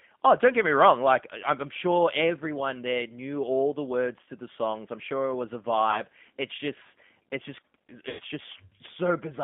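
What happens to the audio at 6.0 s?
Right after "sure it was a", from 5.91 to 6.02 s, there is VoIP packet loss concealed by the speech codec. About 20 ms of audio went missing, which fits a single lost packet. The decoder filled the gap by extending its last pitch and filter settings at falling gain. This gives a brief, fading smear. The sound stays weak or distorted until the frames rebuild.

The G.729 codec also runs through this moment. It squeezes speech into 8 kbit/s and rebuilds it from a filter model. The result sounds rough and synthetic. The band is limited to roughly 150 Hz to 3.5 kHz.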